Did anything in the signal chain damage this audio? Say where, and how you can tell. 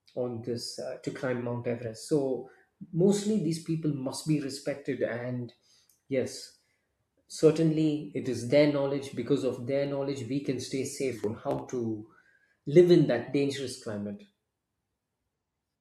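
Yes. Two isolated sharp clicks in the speech, at 9.86 s and 14.14 s, point to dropped samples, likely at the driver or buffer stage. A handful of samples vanish, so the waveform jumps abruptly. There is no audible gap, which rules out a dropout.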